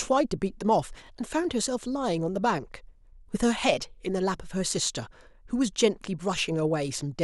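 At 1.07 to 1.10 s the speech shows a brief Bluetooth stutter: a late or dropped packet left the receiver replaying its last slice of about 21 ms, heard as a short doubled blip, consistent with a single lost packet, before playback resumes further along.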